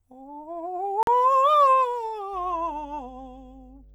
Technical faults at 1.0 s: Bluetooth stall

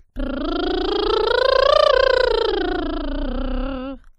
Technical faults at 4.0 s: none

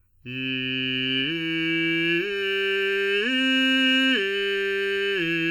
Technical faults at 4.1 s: channel delay (comb filtering); low-bitrate audio saved at a high bitrate

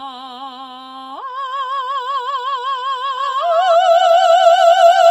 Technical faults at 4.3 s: doubled audio track

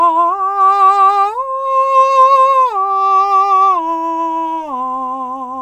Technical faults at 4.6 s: none

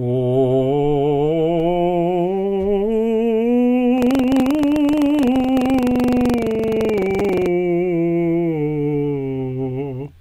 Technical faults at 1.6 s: audio missing between chunks

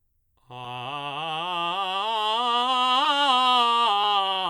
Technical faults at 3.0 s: corrupt frame decoded

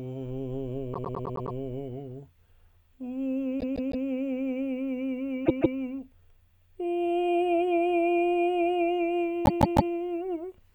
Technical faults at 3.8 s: repeated frames

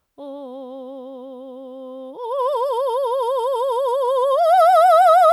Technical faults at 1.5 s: none

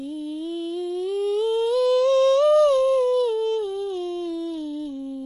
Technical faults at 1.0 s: HE-AAC compression

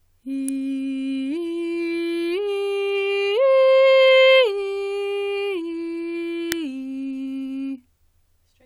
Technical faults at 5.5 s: none

